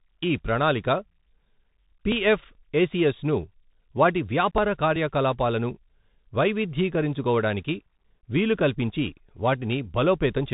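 Throughout, the speech carries Bluetooth CVSD headset codec damage. Nothing above 4 kHz survives, s sounds turn scratchy, and granular hiss sits underneath, which fits a 64 kbit/s CVSD stream.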